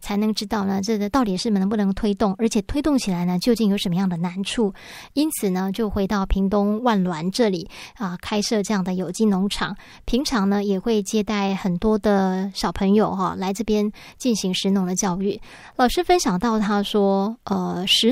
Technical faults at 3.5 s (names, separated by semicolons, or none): none